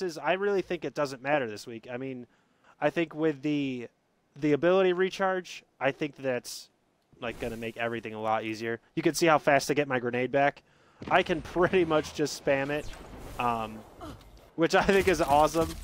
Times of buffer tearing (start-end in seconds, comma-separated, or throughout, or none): none